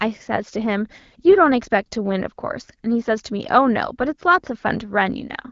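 No faults found in this speech; it is carried over AMR-WB at 12.65 kbit/s, which holds speech clear with only light coding effects, and its band tops out around 7 kHz.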